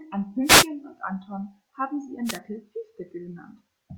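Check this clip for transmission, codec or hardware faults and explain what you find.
Two wireless microphone noise hits break up the speech, from 0.43 to 0.68 s and from 2.24 to 2.39 s just after "haben sie". The FM radio link fades as reflected paths cancel, receiver noise surges, and a brief swish of static is heard. A digital dropout would go silent or glitch rather than hiss.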